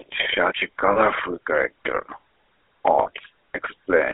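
From start to finish the speech runs through the GSM full-rate codec. It's squeezed into a phone band of roughly 300 Hz to 3.4 kHz, with a buzzy, gravelly roughness, which fits the 13 kbps full-rate coder rebuilding the voice from a crude pulse excitation.

At 0.92 s and again at 3.02 s there's a lost GSM frames hiccup, each about 40 ms long, which fits two dropped 20 ms frames. The decoder repeats the last good frame, so you hear a brief rough, metallic ring in place of the speech.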